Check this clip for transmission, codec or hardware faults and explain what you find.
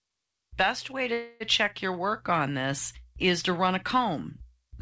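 There is one transmission fault, a call audio freeze between 1.13 and 1.43 s, just before "check your work on". The likely cause is packets held up in transit until the jitter buffer ran empty. For about 273 ms the receiver stretched the last sound into a fading buzz or hiss. Because the audio then resumes where it stopped, nothing is lost, but everything after it arrives roughly 0.27 s later. On a spectrogram the gap appears as a smeared, unchanging band in place of normal speech structure. Like the rest of the G.722 call audio, it is empty above 8 kHz. The waveform shows a steady decaying texture there rather than syllable envelopes.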